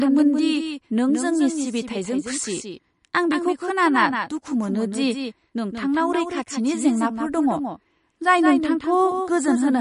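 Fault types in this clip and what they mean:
Doubled audio track: the speech is heard twice, a second copy about 150 ms behind and about 5 dB quieter, with no decay. Unlike echo it's likely a second capture path.
MP3 compression: nothing above 10.5 kHz, plus plainly audible watery swirl on the speech. That swirl, absent from a plain low-pass filter, likely comes from a low-bitrate MP3 encode.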